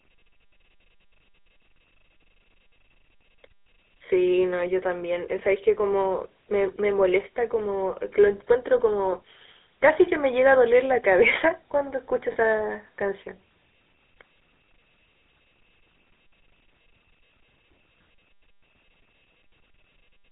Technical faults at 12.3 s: GSM full-rate codec; lost GSM frames

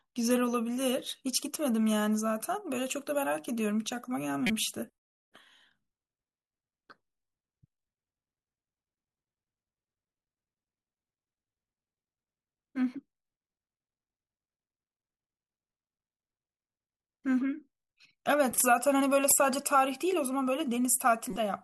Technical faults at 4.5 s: corrupt frame decoded

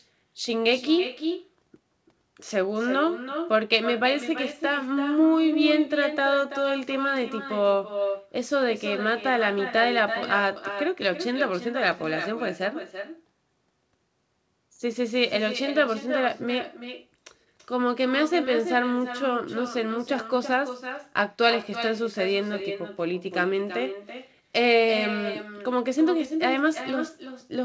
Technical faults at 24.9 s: echo with no canceller

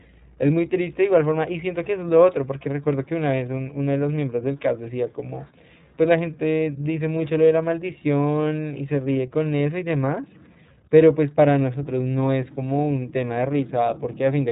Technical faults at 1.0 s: iLBC codec

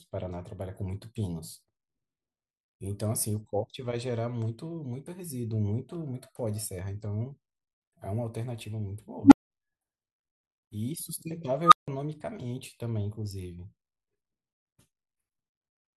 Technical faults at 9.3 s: unstable filter

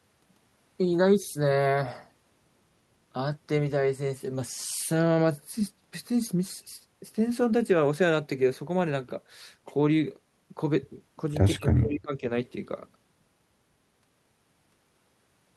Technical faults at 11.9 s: speech suppressed in double talk

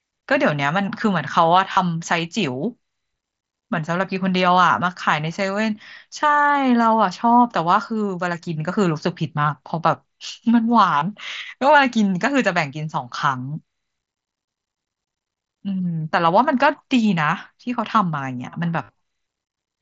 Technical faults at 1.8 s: concealed Bluetooth headset packet loss

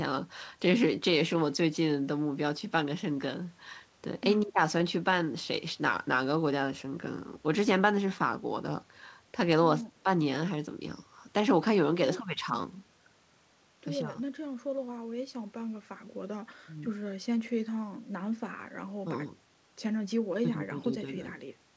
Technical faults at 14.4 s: none

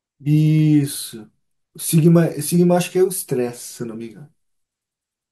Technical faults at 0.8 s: CD scratch ticks

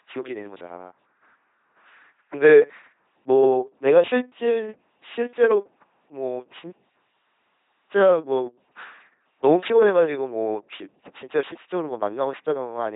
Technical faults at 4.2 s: LPC-10 vocoder

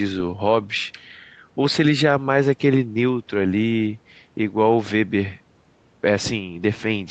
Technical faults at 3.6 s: none

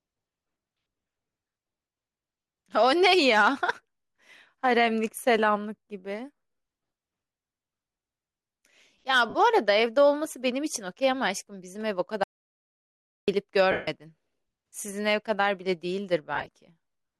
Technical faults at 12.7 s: audio dropout to silence

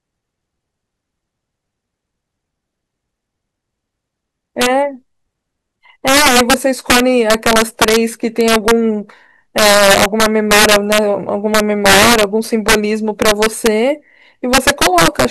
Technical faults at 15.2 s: integer overflow

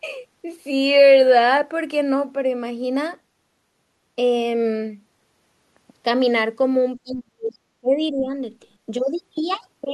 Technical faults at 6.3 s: none

